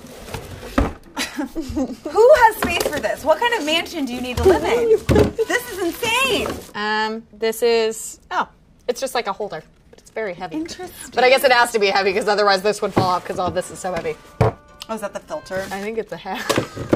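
No technical faults can be heard anywhere in this audio.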